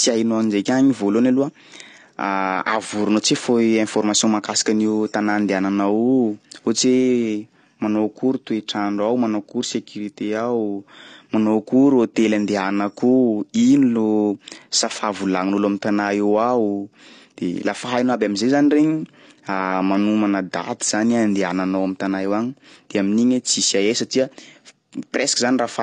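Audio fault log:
Throughout: AAC compression, with nothing above 9.8 kHz and plainly audible codec damage across the speech. The hard top-end cut-off and coarse quantisation of each frame's spectrum point to a low-bitrate AAC-LC encode, likely around 32 kbps.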